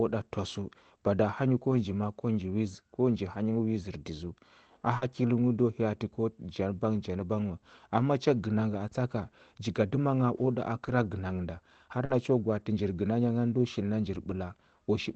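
At 1.71–1.73 s, just before "nji ma a ko", a lost packet rebuilt from error correction replaces 20 ms with a rougher, noisier copy, with no gap or break in continuity. At 4.97–5.03 s comes short concealed packet loss. The decoder fills 40 ms by extending the preceding sound, so it is heard as a brief smear or wobble rather than grainy roughness. Its last 20 ms, from 5.01 s, is again a rebuilt packet. Further rebuilt packets follow at 7.19 s and at 8.73–8.75 s, the latter just before "atsa ka", then at 10.87–10.89 s. At 12.05–12.11 s there is another 40 ms concealed loss, with the same smear, and it ends in a rebuilt packet at 12.09 s. The last rebuilt packet is at 14.29–14.31 s, right after "ngani ndo shil na". The call path's 8 kHz bandwidth keeps the top frequencies limited throughout, so the rebuilt frames show no extra high-frequency dip.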